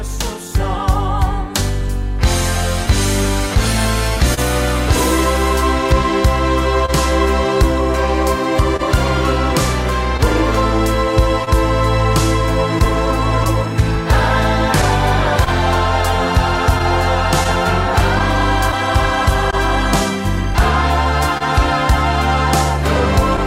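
Across the whole clip the tempo feels faintly unsteady, with small hiccups arriving at uneven intervals rather than on any regular beat. This is clock drift between sender and receiver. The sending side's clock runs roughly 1.5 percent slow relative to the receiver, so audio arrives a little slower than it is played out. The jitter buffer keeps draining, and the receiver has to keep compensating to avoid running dry.

From 0.48 s to 20.6 s those compensations are audible as repeated timing corrections: tiny moments where a fragment seems to linger or recur, all nudging in the same direction. Because the sender is slow, the receiver repeats short pieces instead of cutting them, adding roughly 50 ms in total over that stretch. Each edit is small and sits at playback speed, so it registers as a slight stumble in pacing rather than a clear glitch.

Between 2.86 s and 6.90 s there are brief ticks and little smears, about five of them. 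These are scattered short gaps, where individual packets went missing or came too late and the receiver covered each hole by carrying the preceding sound forward. Around 70 ms is patched in total, no single gap longer than about 30 ms, roughly 2 percent of that span, so nothing audibly drops out.

The same pattern returns from 8.76 s to 19.55 s, now about ten scattered short gaps spread over the longer stretch. Again each shows up as a momentary tick or smear, with the longest near 30 ms. Together they account for roughly 200 ms of concealed audio, still around 2 percent of the span. The concealment extends the last sound across each hole, which is why the result smears rather than going silent.

At 21.38 s to 21.42 s a sound is held just a touch too long, with a faint buzz or dip before the audio carries on. This is a short stall from a late packet. The next packet was not there when playback needed it, the jitter buffer ran empty, and the receiver stretched the last sound for 28 ms until the packet arrived. 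Playback then resumed from the same point, so nothing is lost, but the delay grows by 28 ms.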